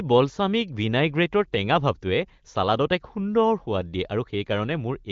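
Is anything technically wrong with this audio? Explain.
No, nothing technically wrong can be heard here.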